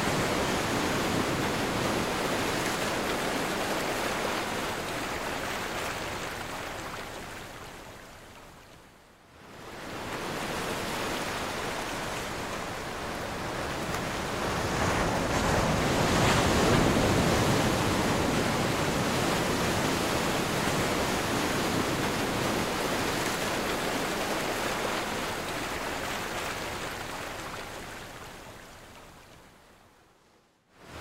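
No dropouts, glitches, level jumps or other technical faults can be heard anywhere in the clip.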